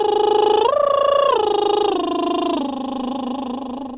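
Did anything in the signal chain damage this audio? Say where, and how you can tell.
No, nothing stood out on listening as damage to this music, and the call path's G.711 A-law coding shows only as the expected absence of anything above 4 kHz.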